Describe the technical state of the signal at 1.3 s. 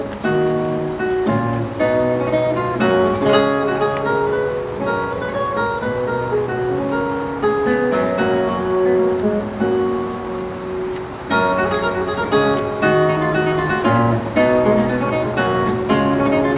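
At 1.3 s the signal is intact, with no audible technical fault at that moment.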